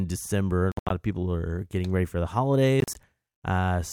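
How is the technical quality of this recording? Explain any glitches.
The speech has two dropouts. From 0.72 to 0.91 s, just before "of people are getting", and from 2.80 to 2.95 s, right after "getting ready for the", the sound cuts out in short, sharp-edged holes (gaps up to 75 ms, then 37 ms) and picks up further along, as if it had kept playing underneath. That's likely a Bluetooth dropout, with packets reaching the headphones too late and getting discarded.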